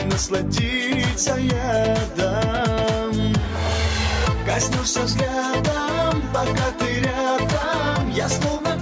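Gain pumping runs through the whole clip, with the level swinging by something like 15 dB. The likely cause is input gain set far too high, with a fast limiter or compressor clamping down on each peak and releasing in the gaps, so loud and quiet passages sit unnaturally close together and the sound comes across squashed. The top end stops around 8 kHz, as expected from call microphone processing.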